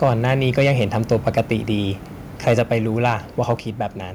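Microphone overload puts a harsh, crackling edge on peaks at 0.02–0.32, 0.58–0.69, 1.12–1.40, 2.47–2.59, 3.05–3.13 and 3.50–3.52 s, likely from input gain driving the converter past full scale, flattening waveform tops. At 2.59 s and 3.60 s the microphone volume is stepped down by about 2 dB and about 4 dB: speech and background fall together in one clean step, unlike the crackling overload.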